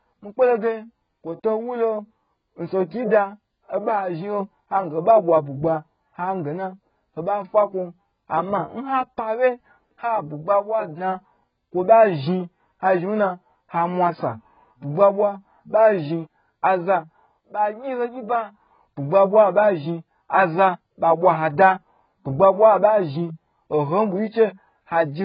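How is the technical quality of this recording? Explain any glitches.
Technical quality is poor, with heavy AAC compression damage throughout the speech. Nothing reaches above 5 kHz, and the remaining spectrum sounds holey and smeared, with warbling on sustained vowels and fizzy sibilants. The likely cause is AAC-LC quantising each frame's frequency lines so coarsely that bands drop out or fill with substitute noise, which fits a bitrate around 12 kbps. A plain low-pass filter would only dull the sound, without the warble and fizz.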